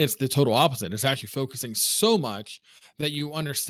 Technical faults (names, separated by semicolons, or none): microphone overload; microphone volume stepped down; repeated stalls (stutter)